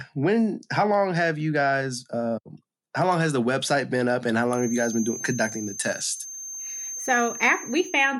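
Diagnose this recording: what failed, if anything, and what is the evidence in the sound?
Feedback whistle, 4.44 s to the end, after "been up and how": a 6.3 kHz tone well under the speech, likely from an acoustic loudspeaker-to-microphone loop ringing just short of a howl.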